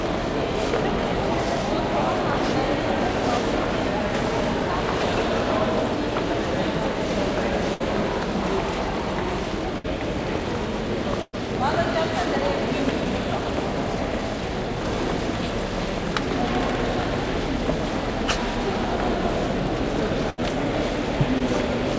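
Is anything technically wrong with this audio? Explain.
Yes. There are four bursts of packet loss, at 7.74–7.82, 9.78–9.86, 11.22–11.42 and 20.30–20.41 s. Runs of packets arrived too late or not at all, so the receiver stretched the last sound and faded it. Each burst is heard as a held, dimming smear, followed by a skip of 60 to 120 ms of missing audio. The 11.22 s burst is the longest and drops into about 40 ms of silence before the sound resumes.

There is also a short concealed packet loss at 21.39–21.42 s. Roughly 20 ms never reached the decoder, and the gap was patched by extending the preceding sound and blending it back into the real audio. The result is a brief smear or wobble.

All of this rides on a call path whose band stops at 8 kHz, consistent with a G.722 codec.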